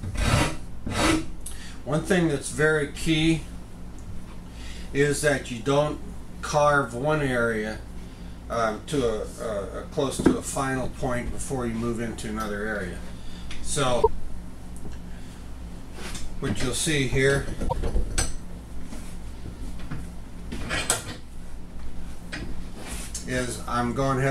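Damaged data in the compressed stream makes the decoder lose frame sync around 13.99 to 14.07 s and 17.65 to 17.73 s, each a brief garbled blip.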